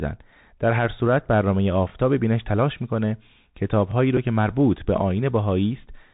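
Muffled, narrowband speech with scratchy s sounds and a granular hiss runs throughout: a Bluetooth CVSD headset codec, passing nothing above 4 kHz and consistent with a 64 kbps link. From 3.91 to 3.94 s a brief stutter repeats about 21 ms of audio. These are overlapping chunks: each roughly 2-second chunk began before the previous one ended. At 4.17 s a small tick is a Bluetooth headset packet repeated: about 7.5 ms of audio, consistent with two lost packets, was filled by decoding the previous packet again.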